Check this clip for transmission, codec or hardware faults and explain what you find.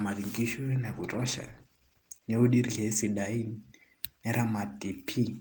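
One transmission fault is present. From 0.83 to 4.11 s the speech turns rough and muffled, with the top end dulled for about 1.5 s at its worst. This is a call bitrate drop: the encoder was starved of bits, which fits a fall from around 32 to 14 kbps, so it coded coarsely and trimmed high frequencies.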